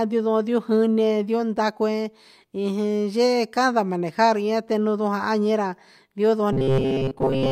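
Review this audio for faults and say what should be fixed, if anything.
From 6.53 s to the end at 7.52 s, the speech collapses into robotic sound from repeated short buffers. It becomes a rigid, metallic buzz near 133 Hz that only loosely tracks the speech. That pitch fits a fragment of about 7.5 ms being played over and over. The likely cause is audio arriving too late, so playback loops the last few milliseconds for most of that stretch while real audio is dropped. To prevent it, enlarge the jitter buffer and keep the audio thread from being starved.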